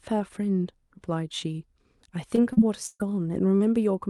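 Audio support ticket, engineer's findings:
Short concealed packet loss, three events: 2.35–2.39 s, 2.53–2.59 s, 3.57–3.62 s. Brief smear or wobble where the sound briefly holds its prior character. Receiver-side concealment extends the last audio into a 20 ms hole, then 40 ms, then 40 ms, and crossfades back. Brief consonant content may drop out. Component: decoder loss concealment.

Lost packet rebuilt from error correction, four events: 2.37–2.39 s, 2.57–2.59 s, 3.00–3.02 s, 3.60–3.62 s. No gap, but each 20 ms stretch turns rougher and noisier. Opus in-band FEC copy from the following packet played in place of the lost one. Each follows a concealment stretch or falls inside the burst. Component: decoder FEC path.

Burst of packet loss, 2.87–3.07 s. Held buzz or fading hiss, attenuating across roughly 130 ms of concealed fill, about 20 ms of silence, then resumption further on. Around 120 ms of audio never arrives. 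A 20 ms FEC-rebuilt frame sits inside at 3.00 s. Component: network loss and jitter buffer, decoder concealment.

Path: Opus, audio band limited to 12 kHz, codec noise consistent with about 64 kbps.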